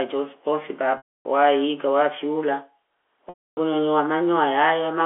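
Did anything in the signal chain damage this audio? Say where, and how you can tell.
Yes. At the network stage, packet loss with pitch repetition hit 0.97–1.25 s and 3.29–3.57 s, before "nyonyo wa". Each 280 ms gap repeats one pitch period, fades to silence, then cross-fades back.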